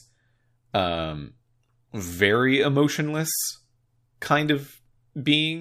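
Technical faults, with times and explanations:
No technical faults heard.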